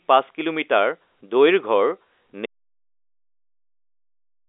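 At 2.46 s the speech cuts off into silence with no room tone, lasting to the end: an audio dropout to silence, likely from a lost input while recording continued.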